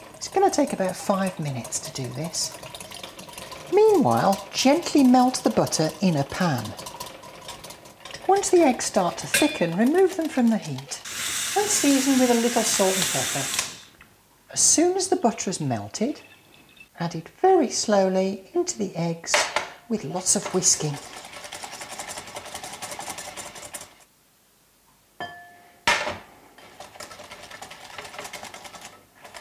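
Nothing in this audio stood out as a technical problem on listening.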